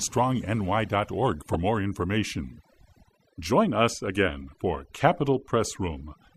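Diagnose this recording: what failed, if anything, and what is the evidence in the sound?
The background between phrases drops to near silence but glitters with twinkling specks. This is overdone noise removal at the call-processing stage: a suppressor set too aggressively is pushing individual frequency bands down or off whenever they sit close to its noise estimate. The quieter parts of the speech fall under that threshold and are removed along with the noise, leaving isolated bands flickering on and off.

From 1.53 to 1.56 s, just before "more information", a brief glitch stands out, peaking at roughly -10 dBFS. This is a corrupt frame decoded at the codec stage. Bits in what sounds like a single compressed frame were flipped, and the decoder played the frame anyway. Misread gains and codes placed energy at the wrong frequencies for about one frame length, which is heard as this short glitch.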